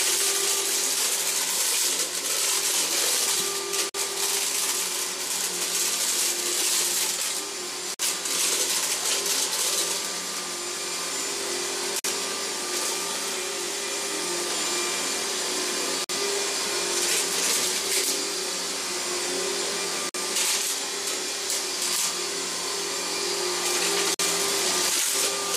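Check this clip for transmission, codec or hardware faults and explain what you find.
There's one problem here, a gap between chunks, repeating steadily. Holes of 50 ms sit at 3.89–3.94, 7.94–7.99, 11.99–12.04, 16.04–16.09, 20.09–20.14 and 24.14–24.19 s. The audio seems to arrive in 4.0 s blocks with silence slipped in at every join, so nothing goes missing, but the sound gets short dropouts on a regular beat.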